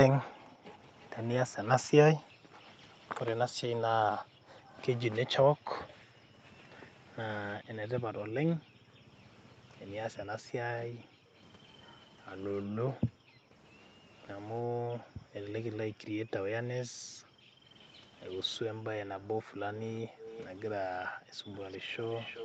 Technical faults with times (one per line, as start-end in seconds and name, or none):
0.29-21.52 background gated by the echo canceller
1.00-7.17 echo leak
18.35-22.45 echo leak